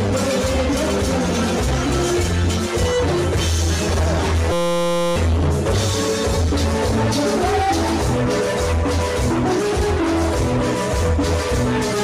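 A system hang loop runs from 4.52 to 5.16 s. The playback system froze while the sound hardware kept cycling through the same small ring buffer, replaying one 5.8 ms slice of audio 110 times in a row. That slice length fits a 256-sample buffer. Because the loop is so short, it repeats 172 times a second and sounds like a steady buzz at 172 Hz. About 0.7 s of the original audio is lost.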